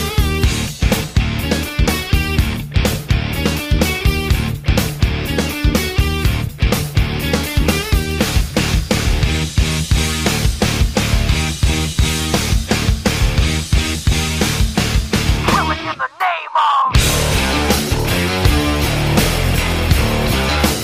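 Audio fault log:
Nothing here calls for an entry, as no audible faults turn up anywhere in this clip.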